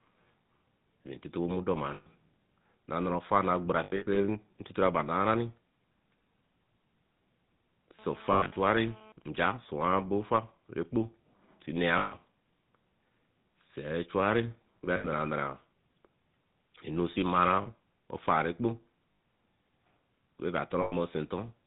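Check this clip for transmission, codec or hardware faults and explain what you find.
Four faults are audible: GSM full-rate codec coloring throughout, repeated lost GSM frames, a GSM phone buzz and GSM signalling bursts.

GSM full-rate codec: Across the whole speech clip the sound is buzzy and gravelly and nothing above 4 kHz is present, which fits the 13 kbps full-rate coder. It models the vocal tract and drives it with sparse, regularly spaced pulses. A spectrogram shows a hard ceiling at 4 kHz and a coarse, pulse-striped texture.

Lost GSM frames: These occur at 1.94–2.08 s, 3.84–4.18 s, 8.32–8.53 s, 11.98–12.13 s, 14.96–15.08 s, 17.62–17.67 s, 19.12–19.20 s and 20.82–20.94 s. Each run lasts between 40 and 180 ms. The 3.84 s event is a scatter of short gaps, none much longer than a fraction of a tenth of a second. Missing frames are filled by repeating the last good frame at falling level, so the sound rings metallically. 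In the waveform this appears as a frozen, decaying envelope, and on a spectrogram as smeared, static harmonics.

GSM phone buzz: From 7.99 to 9.12 s, a hard, raspy buzz at 217 Hz sits about 22 dB below the speech. It comes from a nearby 2G phone in a call, whose radio bursts are rectified by the audio circuitry. On a spectrogram it forms a stack of evenly spaced harmonic lines that ignore the speech.

GSM signalling bursts: From 9.22 to 10.06 s, even ticks with a longer 217 Hz buzz twice a second follow, roughly 30 dB down. It comes from a nearby 2G phone in a call sending only sparse burst groups while its user is silent. A spectrogram shows broken vertical clusters of harmonic lines instead of continuous ones.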